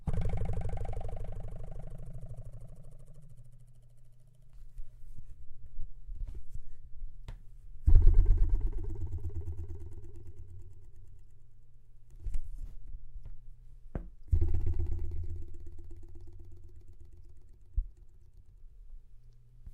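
Everyday sounds make up this recording, and no technical fault can be heard anywhere in it. There is nothing to time or to trace back to a cause.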